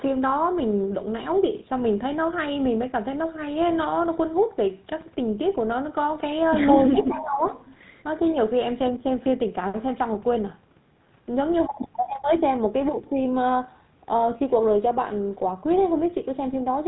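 From start to finish the speech has passed through a GSM full-rate codec. The codec rebuilds the voice from a vocal-tract model driven by regularly spaced pulses and discards much of the excitation detail. The damage is plainly audible: a buzzy, gravelly roughness and nothing above 4 kHz, which fits the 13 kbps GSM full-rate codec.

From 6.94 to 7.42 s the talker's level sags, most likely speech suppressed in double talk. With both ends talking at once, the echo canceller could not separate the near talker from the loudspeaker echo and pulled the signal down. The dip reaches roughly 10 dB and the dulled or broken stretches add up to around 400 ms, so the voice briefly thins and fades.

Within that same window the echo canceller also failed to remove the far end's loudspeaker sound. From 6.97 to 7.24 s a delayed copy of the voice comes back about 0.4 s late, likely an echo leak. It sits roughly 15 dB below the speech. 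A second scrap follows from 7.43 to 7.75 s with the same 0.4 s delay and is fainter, roughly 20 dB down.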